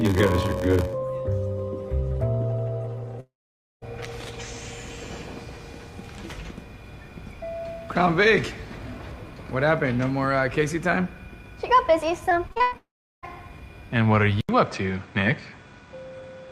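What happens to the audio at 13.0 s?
At 13.0 s you're right in the middle of what sounds like a long network dropout, running from about 12.77 to 13.25 s. The last bit of sound gets smeared forward into a buzzy tail that dies away, and for roughly 0.36 s there's basically nothing. That's concealment padding out a gap where no packets likely arrived. When audio resumes at 13.25 s, about 0.46 s of material has simply gone missing.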